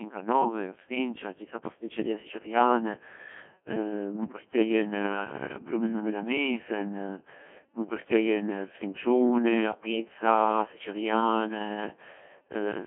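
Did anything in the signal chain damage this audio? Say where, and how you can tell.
Yes. Codec 2 vocoder damage is present throughout, at the codec stage. The speech sounds heavily robotic and buzzy, confined to 200 Hz–3.4 kHz with nothing above 3.5 kHz. Only pitch, voicing, energy and envelope survive, resynthesised from sine waves, which fits about 1.2 kbit/s.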